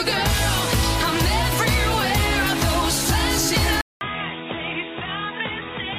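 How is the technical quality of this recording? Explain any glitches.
One fault degrades the recording near the end. At 3.81 s, a 200 ms silence. The sound then turns dull, with nothing above 3.8 kHz, and about 10 dB quieter. The input likely switched to a poorer device.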